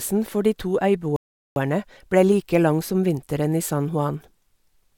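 At 1.16 s the speech halts for about 0.4 s, a rebuffering stall: the player exhausted its downloaded audio and waited for more data before continuing. Playback then picks up exactly where it stopped, so nothing is skipped, but roughly 400 ms of dead air is inserted, ending at 1.56 s. On a waveform this shows as a flat gap; on a spectrogram, a clean vertical band of silence with the speech energy resuming seamlessly on the other side.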